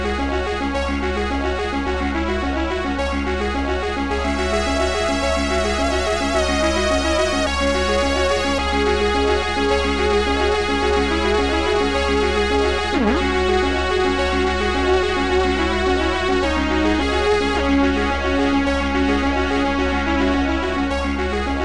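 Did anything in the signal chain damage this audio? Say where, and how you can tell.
No, nothing along the chain seems to have touched this one, since there's no moment in the audio where anything sounds off or out of place.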